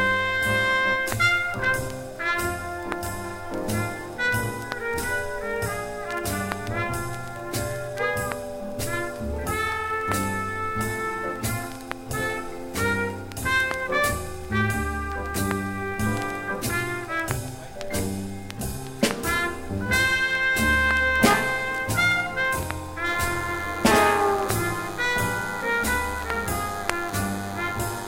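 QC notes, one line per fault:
23.06–28.07 s, DECT cordless phone buzz: a thin, steady buzz sits roughly 15 dB under the sound to the end. Radio bursts repeating every 10 ms are rectified into the audio path, giving a 100 Hz tone with a dense comb of harmonics, visible as evenly spaced horizontal lines on a spectrogram.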